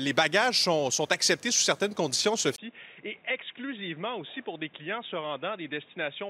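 At 2.56 s the sound goes quiet for about 20 ms, then returns noticeably duller and boxier, roughly 10 dB lower, and stays that way to the end. Nothing above 3.8 kHz survives, and a new, fairly faint background noise appears. This is likely the input switched to a poorer device. On a spectrogram, the upper band is cut off sharply at 3.8 kHz from the switch onward. The waveform shows a brief gap followed by a smaller envelope.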